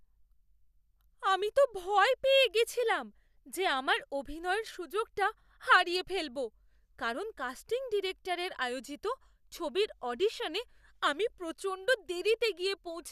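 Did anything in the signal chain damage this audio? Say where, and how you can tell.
Yes, in the codec: a corrupt frame decoded at 5.92 s leaves a faint blip, around -35 dBFS, where flipped bits put energy at wrong frequencies.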